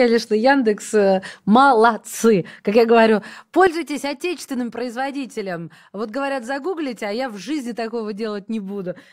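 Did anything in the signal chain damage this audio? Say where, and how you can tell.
Yes. A sudden gain jump hits at 3.67 s, right after "я говорю". The sound and the background noise both drop by about 11 dB and stay there to the end. The cause is likely a digital gain setting applied in processing without a ramp. The waveform envelope steps down abruptly, and the spectrogram dims across every band at once, noise floor included.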